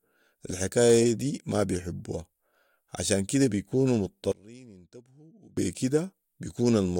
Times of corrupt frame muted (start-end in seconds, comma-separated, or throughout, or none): none